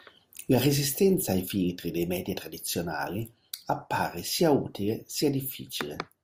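No technical faults can be heard anywhere in the speech recording; the signal holds steady with no interruptions, distortion or level problems.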